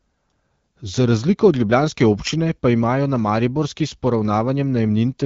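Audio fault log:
No fault is detected: the speech sits within the normal AMR wideband (HD Voice) codec band, with nothing above about 7.5 kHz, and its light coding character fits the 12.65 kbit/s rate.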